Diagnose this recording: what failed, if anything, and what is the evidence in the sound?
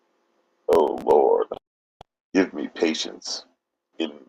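Buffer stage: processor overload crackle from 0.73 to 1.11 s, a gritty run of tiny skips a few milliseconds each, unlike a single longer dropout.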